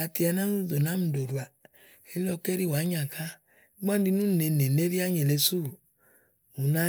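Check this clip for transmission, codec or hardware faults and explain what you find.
Nothing in this recording points to a fault anywhere along its path. There is nothing to report or explain.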